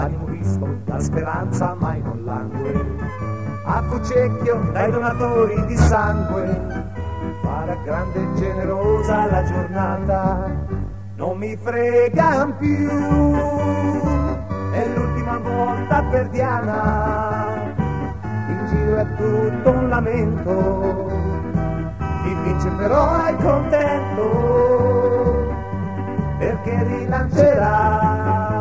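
Nothing technically wrong can be heard anywhere in this audio. There is no moment that needs a time or an explanation of a cause.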